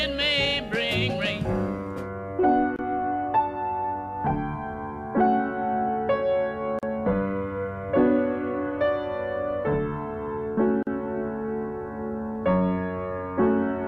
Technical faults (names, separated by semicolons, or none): gap at a join of encoded pieces